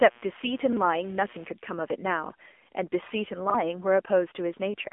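Throughout, the speech is thin, boxy and buzzy, confined to roughly 250 Hz to 3.5 kHz with nothing above 3.6 kHz. This is the AMR narrowband mobile codec. Its pulse-driven vocal-tract model is plainly audible here, with a synthetic edge that suggests a low rate near 7.4 kbps.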